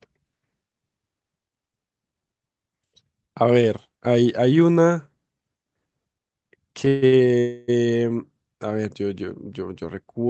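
Speech carried over a call link, with a stutter and then a freeze packed into under a second near the end. The audio tops out around 8 kHz, which fits an Opus call codec running wideband at something like 32 kbps. From 6.85 to 7.27 s there are repeated stalls (stutter): four times the playback runs dry and the receiver stretches the last sound to bridge the wait, the longest pause about 139 ms. Roughly half that stretch is filled-in sound, so the speech drags and hiccups rather than losing anything. On a spectrogram this shows as short, smeared, repeated slices where the harmonic pattern stops evolving. In the waveform, the envelope flattens and repeats between the normal bursts. Then, from 7.39 to 7.70 s, a call audio freeze holds the sound for about 290 ms, most likely because packets were held up in transit and the jitter buffer emptied. It sounds like a fading buzz or hiss rather than silence, after which speech resumes where it left off, now later than before. 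A spectrogram shows a smooth, decaying band with frozen frequency content, and the waveform shows a tapering, repetitive stretch instead of a dropout to zero.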